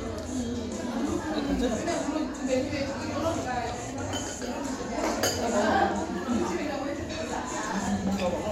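At 1.74 s there's a tiny skip where the audio hiccups. It's an overlap between stream segments: two chunks of the stream claimed the same stretch of time, and the player trimmed the overlap even though that audio wasn't actually duplicated. About 6 ms of real sound gets discarded, so the waveform jumps abruptly across the join. That discontinuity is the skip you hear, and the placement fits segments roughly 6 s long.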